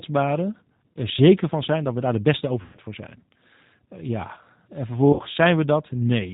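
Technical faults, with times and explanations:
Throughout, G.729 codec. The speech is carried at 8 kbit/s, and the damage is plainly audible. The codec does not store the waveform. It rebuilds each 10 ms frame from a vocal tract filter, a pitch predictor and a few pulses per half-frame. That gives the speech a rough, synthetic edge. Nothing above 4 kHz gets through, so the top of the spectrum is missing.
0.93–0.99 s, 2.62–2.78 s and 5.13–5.23 s, VoIP packet loss concealed by the speech codec. Audio went missing for 30 ms before "zeker van zijn dat", then 120 ms between "we daar de beste" and "voor zijn", then 60 ms later on. The gaps fit one, four and two lost packets. The decoder filled each gap by extending its last pitch and filter at falling gain. The result is a stretched, fading sound. Because each frame builds on the previous one, the speech just after each gap is still affected.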